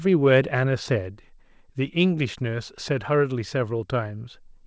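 There are no technical faults to describe in time order; the speech comes through a normal call path, with nothing above 8 kHz, as fits a wideband codec such as G.722.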